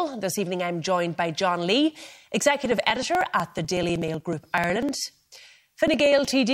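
From 2.65 s to 6.31 s, periodic USB or driver dropouts skip roughly 2 ms of speech every 62 ms. Regular ticks result.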